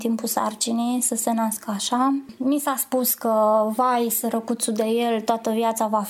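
No technical faults are audible.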